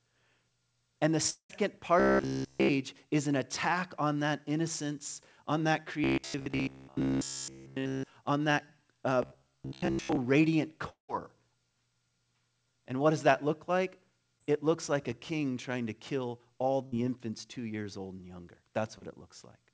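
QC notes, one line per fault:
1.30 to 1.51 s and 10.89 to 11.10 s, long network dropout: about 0.2 s vanishes each time, a fading smear then near-silence, likely a stalled stream before the audio jumps ahead.
2.00 to 2.69 s, 6.04 to 8.04 s and 9.23 to 10.17 s (after "on that uh"), robotic sound from repeated short buffers: a stiff metallic buzz near 67 Hz, likely from a 15 ms chunk looping while real audio is skipped.
14.38 to 14.42 s (after "does that look like") and 18.98 to 19.04 s (after "years old and younger"), short concealed packet loss: 20 and 40 ms drop out, patched over with a quick smeary wobble.
16.86 to 16.94 s, burst of packet loss: roughly 60 ms gone, the last sound stretched into a brief fading buzz or hiss, then the audio picks up further on.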